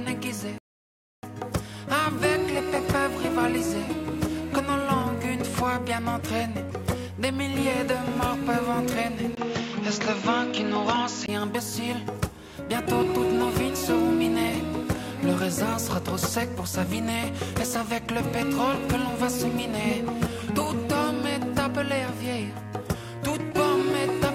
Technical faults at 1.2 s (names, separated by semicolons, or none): rebuffering stall